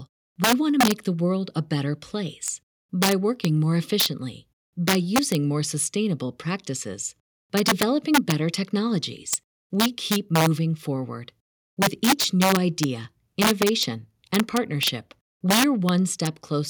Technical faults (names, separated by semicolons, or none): integer overflow